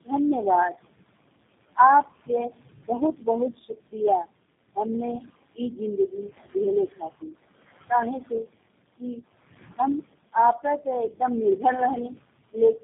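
From start to finish, the background noise ducks away in the gaps and then swells back beneath each phrase. These are noise suppressor artifacts. The suppressor judges which frequency bands hold steady noise and pulls them down frame by frame, by about 19 dB here, so the room noise, sitting about 17 dB below the speech, keeps switching in and out.

Throughout the clip, the speech also sounds rough, muffled and warbly, with nothing above 3.7 kHz, so the top end is missing entirely. This is tandem speech coding. The call was decoded and re-encoded at each link it crossed, and each coder had to work from the already damaged output of the one before it. The layered roughness fits three speech codecs in a row, ending in a low-rate coder of around 8 kbit/s, and the combined losses are worse than any single link would produce.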